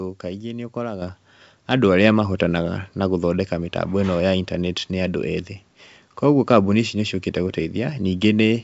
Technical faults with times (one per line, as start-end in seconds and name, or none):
1.02 microphone volume stepped up